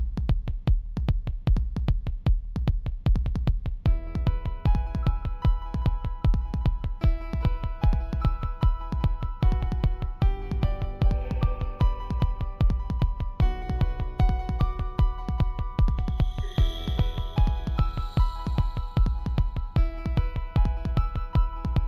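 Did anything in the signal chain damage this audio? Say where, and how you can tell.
Yes. Imaging from linear upsampling at the sample-rate conversion stage, throughout: 16 kHz audio was raised to 44.1 kHz by straight-line interpolation. The top of the band near 8 kHz is dulled, and a very faint mirror image (around 50 dB down) in the 8 to 16 kHz band adds a light metallic shimmer.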